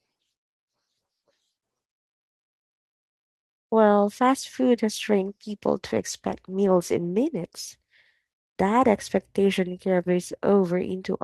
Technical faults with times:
5.21-8.23 call bitrate drop

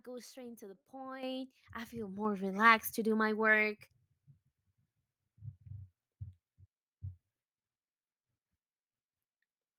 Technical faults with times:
1.23 microphone volume stepped up
2.25 microphone volume stepped up

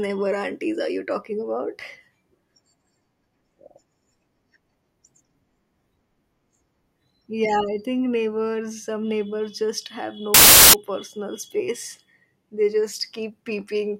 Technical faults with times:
10.34-10.73 file tags played as audio

